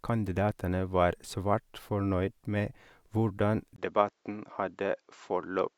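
At 3.76 s the speech drops out for a brief 20 ms gap. After it, nothing remains above 7.6 kHz, so the sound turns duller. The level holds steady, with new faint noise underneath. The input likely switched to a poorer device.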